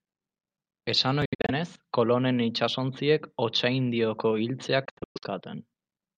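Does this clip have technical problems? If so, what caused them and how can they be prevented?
Yes. This speech clip has a Bluetooth dropout at two points, most likely from audio packets failing to reach the headphones in time and being discarded. From 1.25 to 1.51 s, about 0.16 s of sound is missing in several short holes, the longest about 70 ms. From 4.85 to 5.24 s, about 0.28 s goes missing, with the longest hole about 116 ms. Each hole cuts in and out abruptly or over a few milliseconds, and the speech resumes further along, as though it kept playing through the silence. To prevent this, keep the headphones close to the source with nothing blocking the path, and reduce competing 2.4 GHz traffic nearby.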